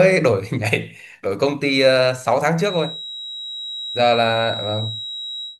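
From about 2.56 s right through to the end of the speech, there's a feedback whistle: a thin, steady tone at 3.8 kHz sitting roughly 10 dB under the talking, swelling and fading slowly in level as it goes. The likely cause is a loudspeaker-to-microphone loop hovering just at the edge of feedback, so that single frequency keeps ringing on its own without ever building into a full howl.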